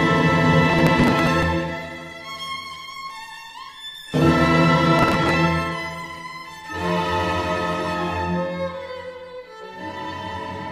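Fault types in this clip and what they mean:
Processor overload crackle: The processor fell behind and missed its deadlines for a run of small audio buffers, each around 10 ms long, and each late buffer was simply skipped. Every skip cuts a short hole with hard edges into the audio, and so many in a row make a gritty crackling tear across the sound, first from 0.70 to 1.43 s and again from 4.99 to 5.34 s, clearing once the load eased.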